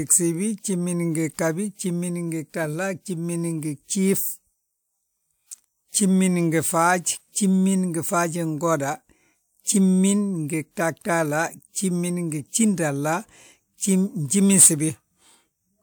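Nothing in the recording stands out as a technical fault; the speech just runs along steadily with no dropouts, clicks, glitches or sudden jumps to catch the ear.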